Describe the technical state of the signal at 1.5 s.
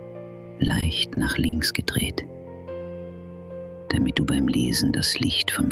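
At 1.5 s the signal is in the last moments of repeated stalls (stutter), running from 0.67 to 1.55 s. Packets arrived late, so the jitter buffer emptied four times. The receiver stretched the last sound to cover about 90 ms, 40 ms at most per gap. Nothing is lost, but the audio drags and stutters.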